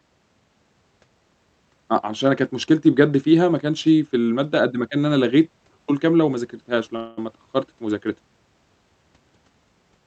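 At 6.96 s the speech stalls for about 210 ms, until 7.18 s, in what sounds like a call audio freeze. The last sound is stretched into a fading buzzy continuation instead of dropping to silence. Packets were likely held up in transit, and the jitter buffer ran dry while the receiver filled the wait. Unlike a dropout, nothing is skipped: the speech resumes exactly where it paused, just later. On this call path the high end stops near 8 kHz.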